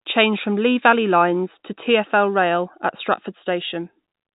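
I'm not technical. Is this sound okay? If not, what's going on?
Yes, nothing stood out as a problem when listening to this speech, which has the slightly narrow sound of an ordinary phone line.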